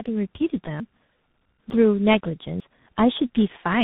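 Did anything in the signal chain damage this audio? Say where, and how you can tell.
Yes. At the codec stage, the whole clip shows tandem speech coding. The speech went through a low-rate G.723.1 coder, then G.711 A-law, then CVSD. Each coder reworked the last one's damage. The speech sounds rough, muffled and warbly, with nothing above 3.8 kHz.

At the driver or buffer stage, audio goes missing between chunks at 0.80, 1.70 and 2.60 s. Each is a sudden skip where roughly a tenth of a second vanishes and the two sides butt together. The regular spacing likely points to one-second processing chunks losing their tail.

In the call processing, automatic gain rises from 1.52 to 3.79 s. Speech and background swell together by about 6 dB over those two seconds. The gain control judged the input too quiet and raised its gain gradually. The bass roll-off from the microphone processing is normal.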